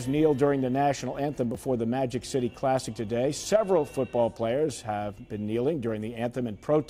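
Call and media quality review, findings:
Discontinuity at 1.55 s with a small forward jump in the audio, no gap. Consistent with a dropped buffer (overrun), likely in the capture path: the application did not read the input buffer before the hardware overwrote it. A few milliseconds of signal are lost and the two sides are joined directly, producing the discontinuity.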